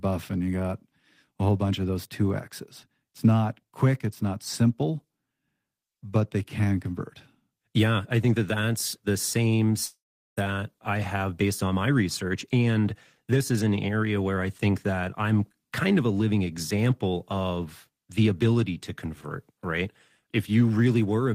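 After "that that's the same" at 9.85 s, the last sound smears into a fading buzz, then 0.4 s of silence. Speech resumes at 10.39 s on "I have based on", with about half a second lost. This is likely a long network dropout that the receiver briefly papered over.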